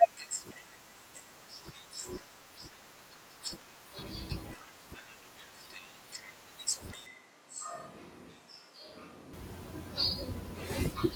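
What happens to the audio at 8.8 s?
At 8.8 s the audio is in a switch to a distant microphone, running from 7.06 to 9.33 s. The sound turns abruptly roomy and hollow, loses bass, drops about 5 dB, and picks up room noise around 35 dB below the speech, likely because the close microphone's signal was lost.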